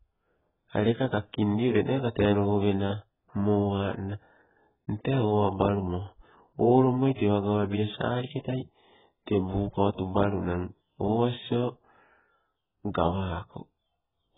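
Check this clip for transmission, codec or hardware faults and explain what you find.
There is one fault, present from start to finish: heavy AAC compression.

Throughout the speech, nothing remains above 3.8 kHz, and the sound is dull and smeared, with a warbling, fizzy edge on sibilants. The likely cause is AAC-LC at a very low bitrate, about 8 kbps, which quantised the frequency lines so coarsely that it cut the top band. A plain low-pass filter would sound cleanly muffled, without this shifting, watery texture.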